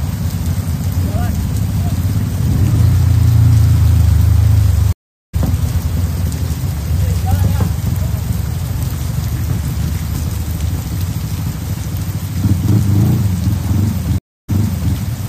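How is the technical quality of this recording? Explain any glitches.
The recording has two dropouts of one kind. Stream reconnects occur at 4.93–5.35 s and 14.18–14.95 s: the connection broke, playback went silent, and a fresh decoder picked up mid-stream, fading in. After the first, about 0.40 s of silence, the sound resumes roughly 0.2 s further along. After the second, about 0.30 s, it restarts 0.47 s earlier, repeating a short stretch.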